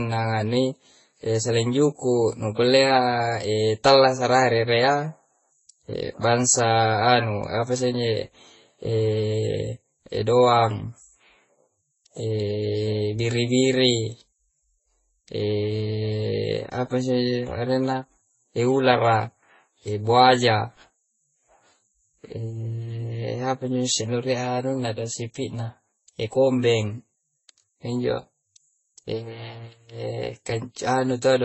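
From start to finish the speech sounds dull and muffled, with nothing above 8 kHz, and two kinds of codec artefacts sit on top of each other and are heard together. The likely cause is transcoding between lossy codecs. An MP3 encode at a very low bitrate, roughly 25 kbit/s, was re-encoded as Vorbis at around 21 kbit/s. The second codec wasted its few bits reproducing the first codec's artefacts, and the 8 kHz ceiling stayed.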